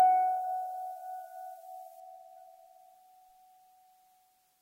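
From 0.0 to 2.0 s, the music shows pre-emphasis left on: a CD-style 50/15 µs treble boost was never de-emphasised, lifting 10 kHz about 8 dB, sounding thin, bright and sibilant.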